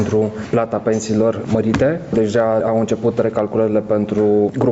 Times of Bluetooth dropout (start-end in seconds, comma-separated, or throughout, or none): none